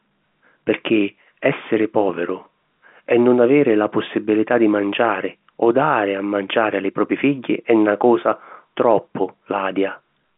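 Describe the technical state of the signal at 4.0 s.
At 4.0 s the audio is intact, with the speech carried cleanly through G.711 telephone coding in its usual narrow band, which tops out below 4 kHz.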